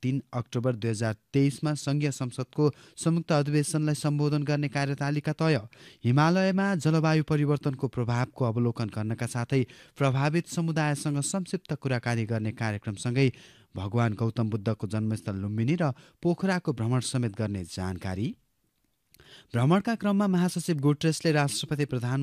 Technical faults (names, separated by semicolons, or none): none